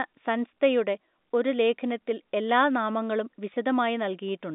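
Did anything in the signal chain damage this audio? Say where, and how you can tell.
Yes. At the network stage, packet loss with pitch repetition hit twice: 0.54 to 0.56 s, and at 3.54 s just after "ഒരു ലേഖനത്തിൽ എല്ലാ നാമങ്ങളും". Each gap lasts about 20 ms, which fits one lost packet. The receiver filled it by repeating the last pitch period, so the sound briefly holds with a slight buzzy sustain before resuming.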